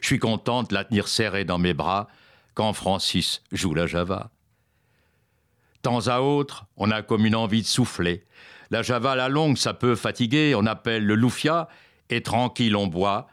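No technical faults can be heard anywhere in the audio, and the signal stays steady and intact throughout.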